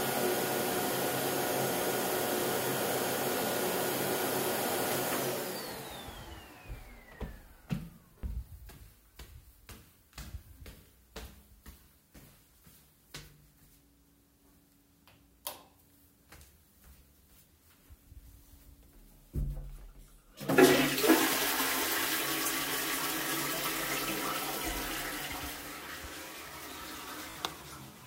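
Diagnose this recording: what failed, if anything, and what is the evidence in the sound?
The failure is a Bluetooth stutter on the wireless link to the playback device. At 8.19 to 8.24 s, a short slice repeats as a brief buzz. At 27.30 to 27.36 s, a longer run of repeats gives a machine-gun stutter. Packets arrived late or not at all. The receiver replayed its last buffer until data returned. About 37 ms was lost at the first event, fitting two dropped packets. About 56 ms was lost at the second, fitting three. Afterwards the audio resumes further on, as if it had kept playing.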